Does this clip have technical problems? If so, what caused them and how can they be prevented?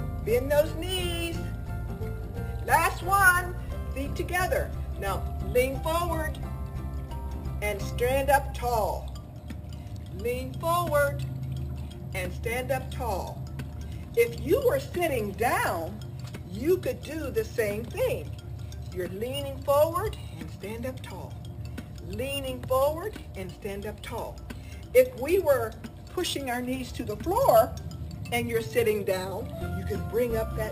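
Yes. Imaging from sample-and-hold upsampling runs throughout: audio at 12 kHz was raised to 44.1 kHz by repeating samples, mirroring content into 6–12 kHz at about -18 dB. Prevent it with a proper low-pass interpolation filter when resampling.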